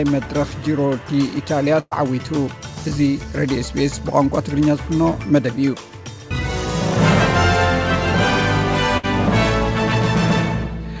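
At 1.80 s the sound smears into a held, fading tail for about 0.11 s, then briefly goes silent. At 8.97 s a shorter 60 ms smear follows. Both are bursts of packet loss: the receiver prolonged the last audio over the missing packets and skipped that material. The band stops at 8 kHz throughout.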